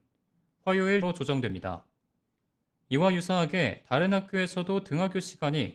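At 0.49 s there is a click. It is the first of five overlapping chunks. The others fall at 1.50, 2.51, 3.51 and 4.52 s. The audio was handled in 1.0 s chunks, and each chunk began slightly before the previous one ended. About 7 ms of sound plays twice at every join. The result is a tick or stutter, repeating once a second.

At 1.02 s the speech skips ahead. About a second of audio was dropped, probably by an overflowing jitter buffer, while later audio was already waiting. Nothing fills the hole. The two sides are butted together almost directly, so the speech lurches forward and a stretch of it is simply gone.

From 1.34 to 2.07 s a jitter buffer speed-up follows. The buffer held more audio than it wanted. To shed the excess, the receiver cut out many tiny pieces, each a pitch period or so long. Roughly 70 ms went in total. The speech runs about 8 percent fast at unchanged pitch, and it sounds hurried.

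A second jitter buffer speed-up runs from 2.84 to 5.5 s. It is gentler, at about 6 percent. It lasts longer and trims around 200 ms. The delivery keeps a rushed, pressed quality, while the once-a-second chunk clicks continue underneath it.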